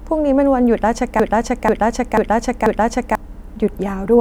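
At 1.20 s the speech locks into a broken-record loop: a fragment about 0.49 s long plays four times back to back, exactly identical each pass, until 3.15 s. The likely cause is a stall in the player, encoder or stream that kept resending the last buffered piece, so the audio meant for that span is lost. On a waveform or spectrogram, the same block of shapes tiles across the screen at a regular 0.49 s spacing.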